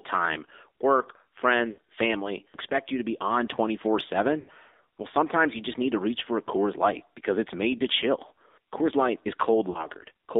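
The whole clip runs through the AMR narrowband mobile codec. The line is squeezed to roughly 250 Hz to 3.7 kHz, and the speech has that plainly buzzy, synthetic edge you get when few bits are modelling the vocal tract, which fits a low mode around 7.4 kbps.

There are three bursts of lost AMR speech frames on top of that. From 1.72 to 1.79 s, just before "family expect you to", the decoder papers over a gap of about 60 ms, so the sound smears and dips. At 4.40 to 4.49 s about 80 ms goes missing and the voice drags out and sags. At 9.70 to 9.85 s a 40 ms hole gives a quick warbly dip. That pattern fits runs of 20 ms frames failing while the decoder recycles the last good settings at falling gain.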